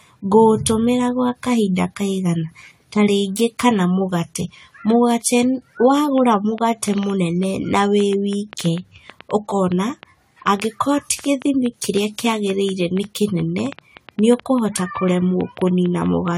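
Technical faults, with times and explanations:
Throughout: generation loss. The speech sounds swirly, smeared and hollow, with softened consonant onsets, likely from around seven rounds of AAC-LC encoding at 64 kbit/s, each on a shifted frame grid. A spectrogram shows patchy holes and blurred transients, with nothing above 20 kHz.
5.98 to 16.29 s: train of clicks. About seventy similar ticks arrive unevenly at roughly 5.7 per second, peaking about 5 dB above the speech and audible in the pauses too, likely from interference or a faulty connection. They appear as thin vertical lines and sharp waveform spikes.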